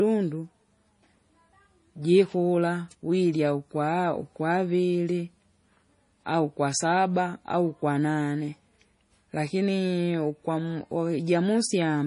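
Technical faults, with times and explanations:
Throughout, MP3 compression, likely the cause: the speech is cut off sharply above 10.5 kHz and carries a heavy watery, swirling texture. The encoder split the sound into frequency lines and had too few bits to cover them all, so it dropped the treble at a fixed point and zeroed weaker lines. Those lines flicker on and off from frame to frame, producing the swirl, which fits a low bitrate around 32 kbps.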